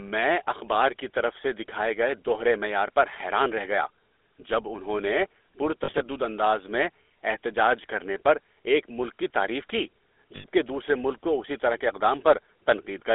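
The whole clip has the buzzy, gravelly grain of the GSM full-rate codec, which fits a 13 kbps coder. The band runs from 300 Hz to 3.6 kHz.

Lost GSM frames follow at 5.84 to 6.02 s, between "جب انہوں نے" and "انداز میں احتجاج کرنے", and at 10.36 to 10.46 s, between "ملک کی تعریف کی" and "دوسرے ملک کو اسی". The decoder repeats the last good frame as a rough, metallic ring.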